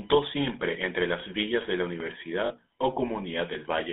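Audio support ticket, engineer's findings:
Computer activity noise, whole clip: faint buzz pulsing at about 1 kHz, around 40 dB below the speech. Processor or graphics load is modulating the shared ground.

GSM full-rate codec, whole clip: buzzy, gravelly speech band-limited to 250 Hz–3.7 kHz. This fits 13 kbit/s GSM full rate, with pulse-excited vocal-tract modelling roughening the voice.

DC step, 2.00 s to 3.55 s: low thump at each end. The waveform zero line shifts and then returns, pointing to a converter offset or a switched input. The speech continues unchanged.

Lost GSM frames, 2.46–2.51 s: brief metallic ring lasting about 40 ms, which fits two dropped 20 ms frames. The decoder repeats the last good frame's parameters.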